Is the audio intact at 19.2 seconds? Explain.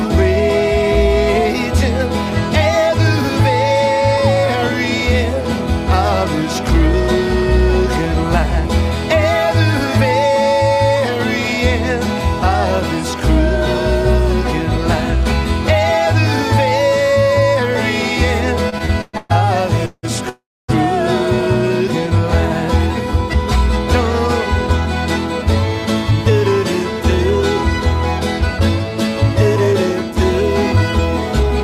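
No. From 18.69 to 19.31 s there are repeated stalls (stutter): packets arrived too late, the jitter buffer emptied five times, and the receiver stretched the last sound for 320 ms total, up to 121 ms at once. The audio drags and stutters, though nothing is lost.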